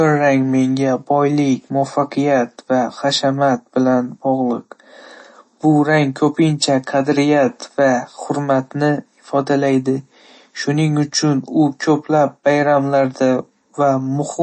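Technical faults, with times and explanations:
Throughout, MP3 compression: the speech has a watery, swirling quality, s sounds turn metallic and chirpy, consonant attacks blur, and nothing is heard above about 8.3 kHz. The likely cause is a low-bitrate MP3 encode, around 32 kbps by the sound of it. Starved of bits, the encoder cut the treble at a fixed point and dropped weaker frequency lines, which flicker on and off from frame to frame and produce the swirl.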